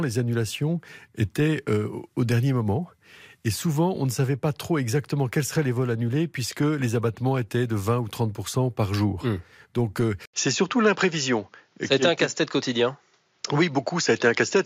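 At 10.26 s the speech drops out for about 80 ms, then returns duller and boxier through to the end. The likely cause is that the input switched to a poorer device mid-recording. On a spectrogram, energy above 7.2 kHz vanishes from that point, leaving a hard ceiling. A new, faint noise floor about 45 dB below the speech appears. The waveform shows a brief flat gap at the switch, with the level about unchanged afterwards.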